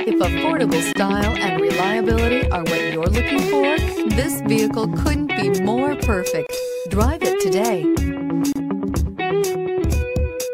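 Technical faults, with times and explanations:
0.93–0.95 s, 6.47–6.49 s and 8.53–8.56 s: gap at a join of encoded pieces. Separately encoded segments were butted together untrimmed, so each join keeps encoder delay and last-frame padding, giving silences of about 27, 27 and 31 ms with smeared edges before the sound resumes where it stopped.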